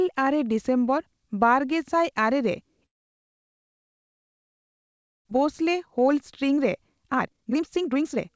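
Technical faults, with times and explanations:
2.86 to 5.31 s, long network dropout: right after "ᱰᱤᱥᱮᱢᱵᱚᱨ ᱵᱟᱨᱜᱮᱥᱟᱭ ᱟᱨᱮ ᱨᱮ" the speech stops. A brief concealment tail fades almost at once, leaving about 2.4 s of near-silence before the voice returns. When it does, roughly 1.3 s of speech has been skipped. The likely cause is a stall in packet delivery: the receiver had nothing to decode, so it could only stretch the last sound briefly and then fall silent.
5.38 to 8.30 s, jitter buffer speed-up: once audio resumes, the speech runs at about 132% of normal speed with its pitch unchanged, so it sounds rushed right to the end. The buffer held more audio than it aims for, around a second of extra delay. To drain it, the receiver repeatedly cut out short pitch-period-sized pieces, removing roughly a second of audio across this stretch, with the whole 8 kHz-limited band (consistent with a G.722 call path) played back hurried.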